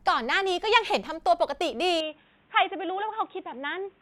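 At 2.01 s the input likely switched to a poorer device: from there the speech loses everything above 3.8 kHz, turns dull, drops a few decibels, and gains faint new background noise.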